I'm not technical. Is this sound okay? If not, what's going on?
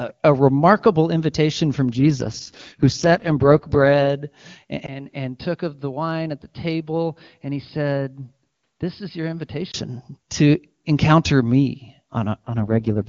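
No. An AMR rate drop happens from 1.92 to 4.09 s, right after "a remarkable invitation from", and again from 12.46 to 13.08 s, after "to encounter me". The phone network switched the call's speech coding to a much lower quality to protect it on a weak signal, so the voice turns rougher and more artificial-sounding without going quiet.

An input switch to a poorer device comes from 4.86 to 9.74 s, ending just before "to encounter me". There is a brief 20 ms silence, then the voice becomes duller, with nothing above about 5.1 kHz, noticeably quieter, and slightly noisier. This was likely caused by the recording jumping to a lesser microphone or headset.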